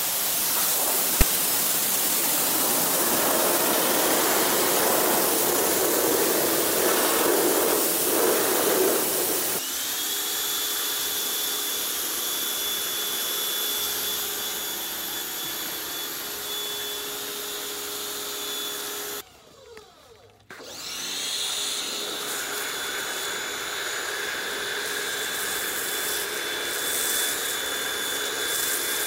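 At 1.21 s there is a very short burst of file tags played as audio: a block of text metadata has been read as sample data. Text bytes decode as a loud, harsh rasp offset to one side of zero, heard as a hard-edged click of static.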